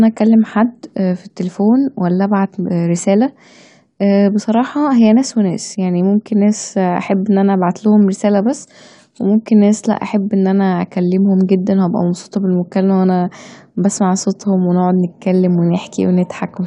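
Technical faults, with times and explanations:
Nothing technical goes wrong anywhere in this speech recording, so there's nothing to flag here.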